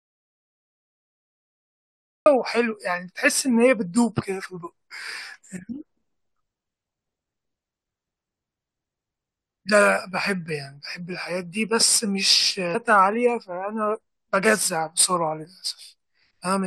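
The input feeding the recorder was likely cut off, through a disconnected device, a broken link or a mute left engaged, while writing carried on with silence. The result is an audio dropout to silence that is already under way when the clip opens and lasts until 2.26 s. Those first seconds are dead digital silence with no room tone at all, and the speech then arrives abruptly mid-flow, with whatever came before it lost.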